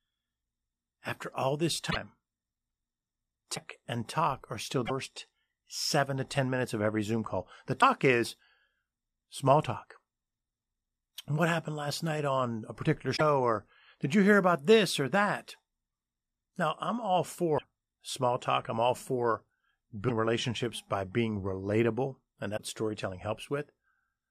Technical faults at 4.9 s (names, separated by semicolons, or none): broken MP3 bit reservoir